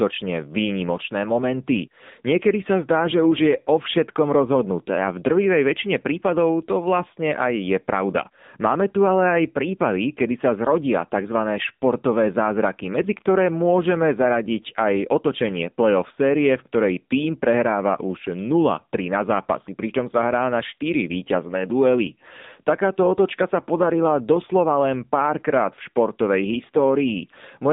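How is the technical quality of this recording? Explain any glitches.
The speech has been through the AMR narrowband mobile codec for its whole length. Nothing passes above about 3.8 kHz and the band sits near 150 Hz to 3.7 kHz. The codec rebuilds the voice from a vocal-tract model and sparse pulses, which fits a low mode around 8 kbps, so it sounds plainly buzzy and synthetic. A simple low-pass filter would only muffle the sound without that artificial texture.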